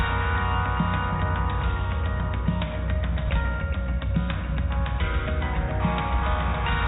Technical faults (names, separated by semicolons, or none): none